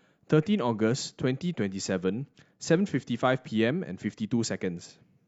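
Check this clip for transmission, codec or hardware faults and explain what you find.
Nothing wrong turns up here: the speech comes through without any transmission, codec or hardware fault that a listener could pick out.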